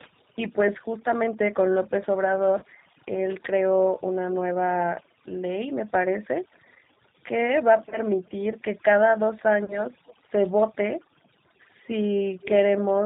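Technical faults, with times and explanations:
Throughout: overdone noise removal. The background drops and breaks up into twinkling specks, and quiet parts of speech are cut away with it. The noise reducer was set too hard and cut bands near its noise estimate. Codec damage is different: it limits bandwidth but doesn't gate the gaps.
Throughout: G.729 codec. The speech is plainly rough and synthetic, with nothing above 4 kHz. The decoder rebuilds each 10 ms frame from a vocal tract filter, a pitch predictor and a few pulses, which fits an 8 kbit/s G.729A stream. The harshness is constant, unlike the watery gating of noise removal.
2.59–2.65 s, 7.89–7.98 s, 9.65–9.83 s: VoIP packet loss concealed by the speech codec. Each event, about 30 ms of lost audio, becomes a fading buzzy tone or coloured noise. The decoder extends its last pitch and filter, and the damage runs past the gap, longest at 9.65 s. 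A plain dropout would be silent, and this is not.
12.41–12.51 s: echo leak. A faint copy of the speech follows 216 ms later, roughly 15 dB below it. The likely cause is an echo canceller on a loudspeaker end that let part of its microphone pickup through. A fixed delay sets it apart from reverberation's smooth decay.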